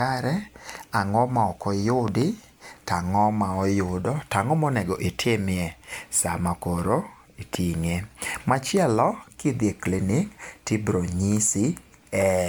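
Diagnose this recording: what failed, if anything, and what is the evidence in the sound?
The speech sounds swirly, smeared and hollow throughout, with softened consonant attacks and nothing above 19.9 kHz. This is generation loss at the codec stage, likely from around seven successive MP3 decode-and-re-encode passes, fitting a 128 kbit/s chain. Each pass requantised on a shifted frame grid, so noise and spectral holes accumulated.

Loud pops break through in a quick pair from 2.08 to 2.24 s, about 10 dB above the speech, and again as a single pop from 7.55 to 7.57 s, about 15 dB above it. The speech continues underneath. The likely cause is a voltage step or pulse from a plug, switch, static or driver glitch in the analogue wiring or driver stage, shaped by the following circuitry.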